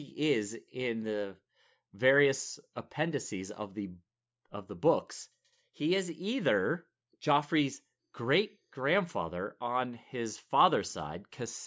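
No technical faults can be heard anywhere in this speech recording. There is nothing in the audio that calls for a timestamp or a closer look.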